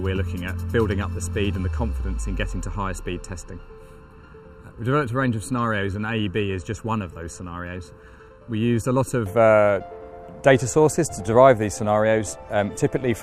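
From the start to 9.26 s the sound is hollow and phasey, with fixed notches. This is channel delay (comb filtering): one channel lags by under a millisecond, so summing to mono cancels frequencies near 700 Hz and its odd multiples.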